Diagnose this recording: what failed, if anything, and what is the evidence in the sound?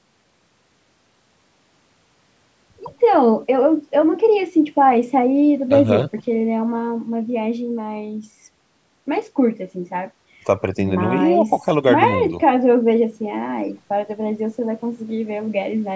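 Nothing failed: the speech has passed through call microphone processing that is doing its normal job, trimming the lowest bass and leaving no content above 8 kHz.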